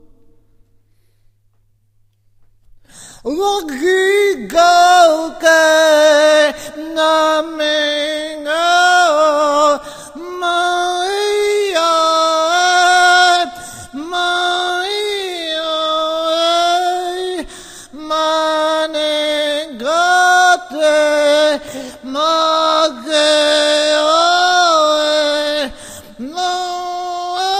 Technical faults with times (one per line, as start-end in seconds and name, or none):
4.59-5.06 hard clipping